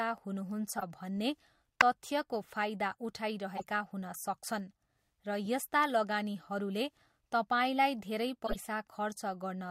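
Brief chirps and noise blips hit the speech at 0.77–0.83 s, before "भन्ने तथ्यको फाइदा"; 1.81 s (loudest), before "तथ्यको फाइदा"; 3.57–3.64 s; 5.45 s (faint); and 8.46–8.56 s, after "तपाईँलाई धेरै". These are corrupt frames decoded: damaged compressed data was played anyway, placing energy at the wrong frequencies.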